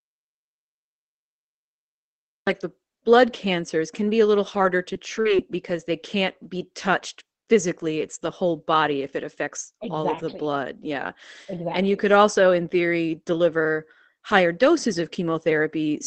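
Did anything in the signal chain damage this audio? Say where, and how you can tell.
Yes. The input stage failed at the very start. From 0 to 2.47 s there is an audio dropout to silence, already under way when the clip begins. The gap is silent, with no room tone. The likely cause is a lost input, with the recorder still writing silence.

The network lost packets, and the Opus decoder rebuilt them from error correction. Rebuilt 20 ms frames fall at 4.07, 4.47, 4.63, 4.85, 4.95, 5.25 and 5.29 s. There is no gap. Each one sounds briefly rougher and noisier, because it comes from a low-bitrate copy carried in the next packet.

Two holes got short concealed packet loss instead. They fall at 4.93 to 4.97 s, filled for about 15 ms, and at 5.21 to 5.27 s, filled for about 40 ms. The decoder extended the previous sound and then blended back in. You hear a brief smear or wobble.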